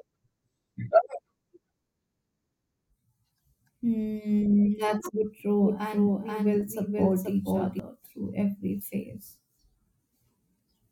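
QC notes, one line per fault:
5.62–7.80 s, doubled audio track: the speech is heard twice here, with a second full-band copy trailing the original by about half a second and sitting around 5 dB lower, so syllables overlap their own repeats. The copy has no reverberant tail or room colouring and switches in and out abruptly at both edges, starting just before "through every phase". This is likely caused by the signal being captured again through a slower path, or an edit leaving two offset copies.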